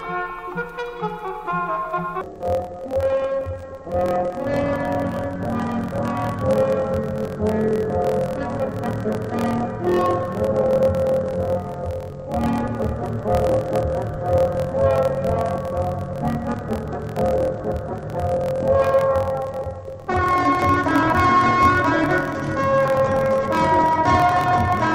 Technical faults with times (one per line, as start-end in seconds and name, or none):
2.21-24.95 interleaved audio read as planar